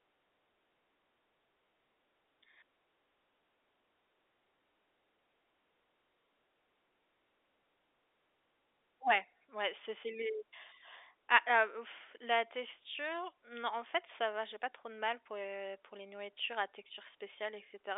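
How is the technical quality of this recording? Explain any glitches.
The recording has one clear glitch, a loudspeaker feedback squeal from 7.91 s to 9.73 s, heard over speech that carries the narrow telephone band of G.711 coding. A microphone is picking up the loudspeaker it feeds, and at 5.4 kHz the loop gain tips above one, so that frequency reinforces itself on each trip round. The tone swells over roughly 0.7 s until it stands about 10 dB above the speech. That gradual self-building rise sets it apart from an interfering whistle or test tone, which would appear at full strength.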